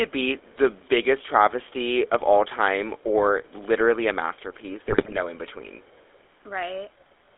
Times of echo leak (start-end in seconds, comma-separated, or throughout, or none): 0.82-0.89, 2.98-3.03, 5.82-6.24